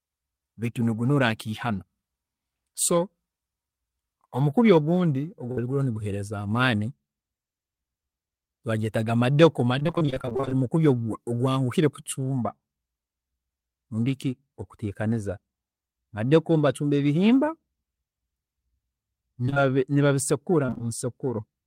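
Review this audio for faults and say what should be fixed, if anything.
A burst of packet loss hits at 5.51 to 5.59 s, just after "omukubi ogundi". About 60 ms went missing. The last sound was stretched and faded, then the audio jumps ahead.

Repeated packet loss gives a choppy, robotic sound from 9.79 to 10.54 s. It starts after "baagyetaga madeku" and clears before "mukubi ogwanguhi kucumba". Nineteen short gaps leave about half that stretch patched. It recurs at 20.66 to 20.81 s with four gaps.

Short concealed packet loss strikes three times in a row, at 19.46 to 19.50 s, 19.50 to 19.54 s and 19.54 to 19.58 s. Each gap of about 20 ms was filled by continuing the last sound, leaving a brief smear.

To prevent these, stabilise the network path and add forward error correction or a deeper jitter buffer so late or lost packets can be recovered.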